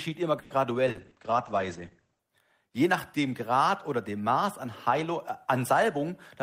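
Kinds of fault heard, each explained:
Call audio freeze: Around 0.39 to 0.53 s the sound stalls and the last bit of it gets stretched out as a fading buzz for about 110 ms, then carries on right where it left off. Nothing gets skipped; everything after just lands about 110 ms later. That's most likely packets held up in transit, with the jitter buffer running dry and the receiver padding the wait until they showed up.
Call bitrate drop: From about 0.89 s to 2.29 s the speech goes rough and muffled. The encoder was pushed from 32 kbps down to 10 kbps, sitting at the bottom for roughly 1.3 s. At that rate Opus codes everything more coarsely and narrows the band from 20 kHz down to 8 kHz, so the top end and crispness disappear. Quality recovers once the bandwidth estimate climbs back up.
Short concealed packet loss: There are two quick blips, at about 0.91 s and 1.07 s, both landing inside the low-bitrate stretch. 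Each time roughly 40 ms of audio never reached the decoder, so the receiver improvised by extending the last sound and then blending back into the real signal. You hear a short smear or wobble, and whatever fell in those 40 ms is simply gone.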